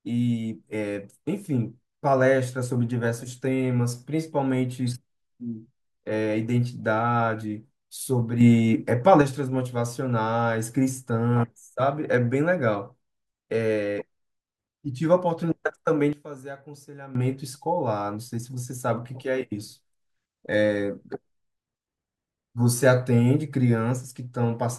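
A gain step likely applied without a ramp causes a sudden gain jump in the speech: about 6 dB louder from 8.41 to 9.22 s, then about 14 dB quieter from 16.13 to 17.15 s, with the background noise shifting level along with it.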